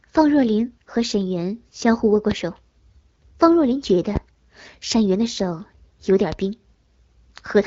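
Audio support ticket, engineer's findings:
Loud pop, three single hits over continuing speech: 2.31–2.35 s, 4.16–4.19 s, 6.32–6.36 s. Sharp thump, first well above speech level, the later two somewhat lower. Likely cause: voltage pulse from connector, switch, static discharge or driver glitch entering the signal chain, shaped into a brief click by downstream stages. Speech continues underneath each pop. Band-limited to 7.5 kHz through the AMR wideband (HD Voice) codec path, with light codec damage.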